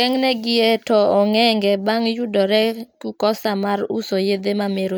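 Nothing in this speech recording stands out as a technical fault, so there's really nothing here to flag.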